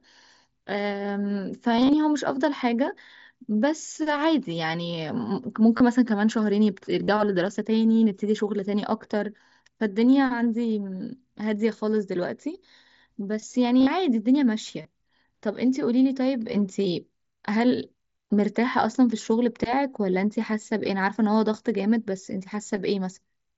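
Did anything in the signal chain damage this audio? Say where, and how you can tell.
Yes: concealed Bluetooth headset packet loss on the wireless link at 1.77–1.93, 5.77–5.80, 7.03–7.08, 13.80–13.87 and 14.82–14.85 s. The receiver filled the gaps by repeating recent waveform, which shows as looped cycles and flat, buzzy harmonic bands.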